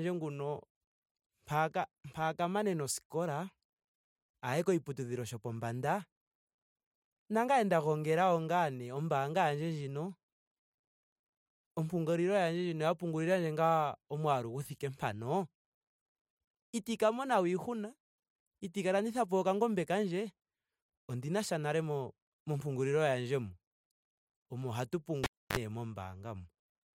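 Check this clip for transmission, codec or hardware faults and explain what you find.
One hardware fault is present: a cable pulled and plugged in, from 25.24 to 25.58 s. A live lead is yanked out and then pushed back in, so a pop marks the break and the speech drops to near silence for about 0.29 s. As the plug goes back in, only the tip makes contact at first, picking up a 47 ms burst of 50 Hz mains buzz before a second pop as the signal returns.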